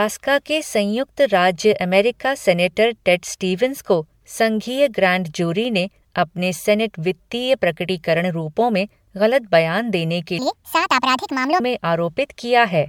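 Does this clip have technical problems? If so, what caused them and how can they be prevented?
Yes. Throughout the speech there is generation loss: a swirly, hollow, smeared quality with softened consonant attacks, beyond what a single encode would give. The likely cause is the audio being decoded and re-encoded as MP3 a few times, at a rate that sounds like about 96 kbit/s, each pass adding fresh quantisation noise on a shifted frame grid. A spectrogram shows blotchy, flickering holes in the upper bands. To prevent it, keep a lossless master and encode only once at the end.

From 10.39 to 11.6 s, right after "बयान देने के", there is a section at the wrong speed. It runs 1.57 times too fast, so the voice jumps roughly seven semitones higher and sounds hurried, then drops back to normal. The likely cause is that stretch being played or edited against the wrong clock rate. On a spectrogram the harmonics step upward and spread apart for that span. 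The waveform's syllables look compressed in time. To prevent it, check that every segment's sample rate matches the project before editing or playback.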